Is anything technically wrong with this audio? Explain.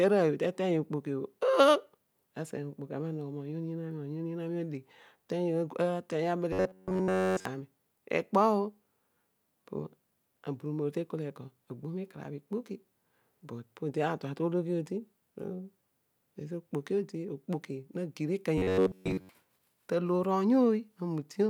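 Yes. From 6.53 to 7.45 s, and for most of 18.58 to 19.29 s, the speech turns into a rigid metallic buzz near 94 Hz, robotic sound from repeated short buffers. It's likely caused by a roughly 11 ms slice looping while fresh audio is skipped.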